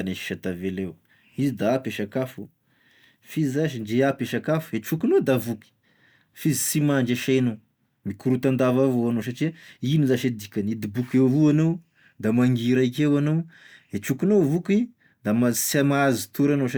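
No dropouts, distortion, noise bursts or timing glitches turn up anywhere in this speech recording, and nothing in it calls for a fix.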